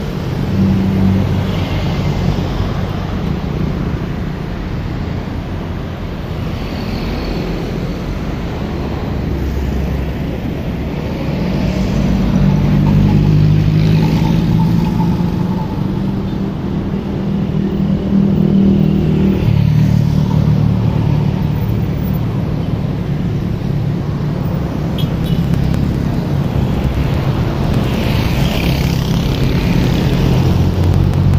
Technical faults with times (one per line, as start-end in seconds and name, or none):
25.24-31.34 periodic USB or driver dropouts